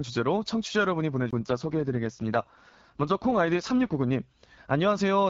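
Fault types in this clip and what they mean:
AMR rate drop: From 1.18 to 4.00 s the speech turns rough, raspy and more synthetic while the bandwidth stays the same and nothing drops out, which fits the network pushing the AMR-WB codec down from 12.65 to 6.6 kbit/s, trading speech detail for error protection.
CD skip: At 1.31 s there is a very brief mute, roughly 20 ms, before the speech resumes from a different point. The laser has jumped to another turn of the disc's spiral after a knock or surface flaw.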